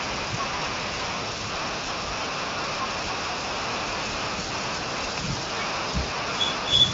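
No technical faults can be heard anywhere in this speech. The AMR wideband (HD Voice) codec path is audible mainly as a band limit, with nothing above about 7.6 kHz and little or no coding damage, which fits a high rate near 23 kbit/s.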